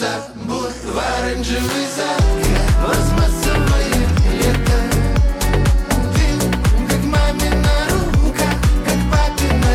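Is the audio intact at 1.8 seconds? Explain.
No. At 1.8 seconds the audio sits inside a run of clock drift buffer slips from 0.41 to 9.11 s. A click recurs every 0.73 s. The likely cause is two clocks differing by about 200 ppm, forcing a few samples to be dropped or repeated.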